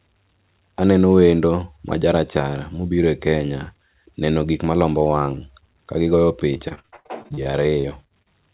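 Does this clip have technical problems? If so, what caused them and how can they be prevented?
Yes. Repeated packet loss (robotic sound) runs from 6.54 to 8.27 s, near the end of the speech. Audio packets kept arriving late or not at all, and each hole was covered by stretching the last good sound forward. That produces a choppy texture with pieces missing: 18 gaps in under two seconds, the longest 85 ms, with about 27% of the stretch concealed. Behind this, the narrowband call audio stops at 4 kHz, which fits G.711 at 64 kbps. To prevent it, stabilise the network with a wired connection or less competing traffic, or enable forward error correction and a larger jitter buffer.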